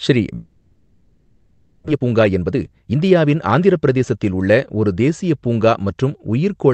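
From 0.35 s to 1.90 s the speech gives way to a smeared, buzzy continuation of the last sound that decays away, and when the talker returns, about a second of the utterance has simply vanished. This is a long network dropout, likely caused by packets failing to arrive. The receiver filled the gap by extending what it last had, for about 1.5 s in all, and roughly 1.06 s of the original speech was never played.

Right after, from 1.92 s to 4.15 s, the speech sounds rushed, running about 119% of normal speed while the pitch stays where it was. This is a jitter buffer speed-up. After the outage the buffer was holding more audio than it wanted, so the receiver trimmed short pitch-period slices over and over, shedding roughly 400 ms of delay. Throughout, the call path carries Opus's coding texture with content limited to about 8 kHz.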